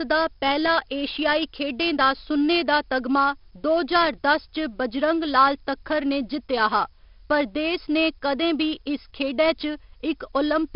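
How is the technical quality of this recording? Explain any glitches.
The recording has clearly audible technical damage throughout. A gritty hiss rides on every loud syllable, sharp consonant onsets sound roughened, and nothing is heard above about 5.3 kHz, giving the speech a dull, muffled tone. These are the signs of heavy 4-bit ADPCM compression. Each sample is stored as a coarse step from a prediction, so the error rises and falls with the level, and attacks outrun the adapting step. The band limit fits a low sample rate at around 44 kbps.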